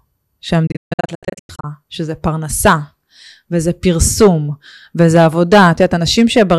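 Between 0.67 and 1.64 s the receiver loses frames and mutes, a digital broadcast dropout: speech cuts out in several short holes, about 576 ms in all, the longest 144 ms. Hard clipping follows at 2.65–2.73 s, 4.02–4.28 s and 5.00–6.55 s, where peaks overdriven by about 7–8 dB are sliced flat, adding harsh fuzz to loud speech.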